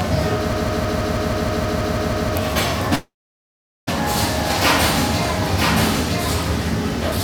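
A second, slower capture path likely fed the same audio into the mix again, producing a doubled audio track throughout. A full-band copy of these everyday sounds trails about a second behind, roughly 5 dB quieter, clean and dry with no room decay, like a flat echo.

From 0.53 to 2.35 s, a stalled player or stream likely kept resending its last buffered fragment, creating a broken-record loop. A 160 ms piece repeats exactly, back to back, 11 times, and whatever should have played during that stretch is gone.

From 2.95 to 3.89 s, a long network dropout likely starved the receiver of about 0.92 s of audio. It stretches the last sound into a brief fading buzz or hiss, then leaves about 0.78 s of silence before the audio resumes further on, with the gap never recovered.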